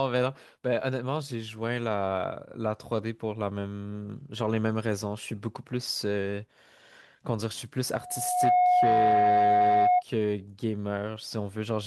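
From 7.93 s to 10.03 s, loudspeaker feedback squeal: the microphone re-captures its own loudspeaker, and at 723 Hz the loop gain passes unity. That tone swells over about half a second into a steady howl, ending roughly 10 dB above the speech.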